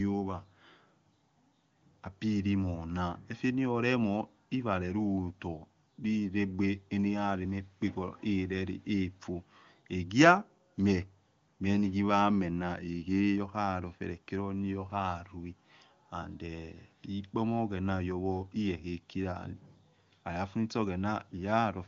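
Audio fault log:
No faults heard in this speech recording.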